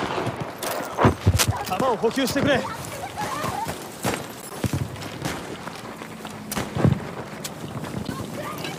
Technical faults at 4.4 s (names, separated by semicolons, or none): corrupt frame decoded